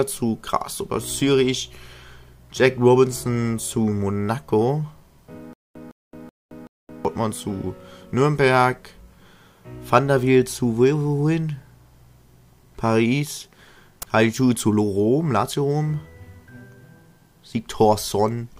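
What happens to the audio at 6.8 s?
At 6.8 s the audio is inside a stutter with silent gaps running from 5.53 to 7.05 s. A 159 ms fragment repeats four times, each followed by 220 ms of digital silence, a 379 ms cycle. The likely cause is a stalled stream replaying its last buffer on each retry. The audio due in that span is lost.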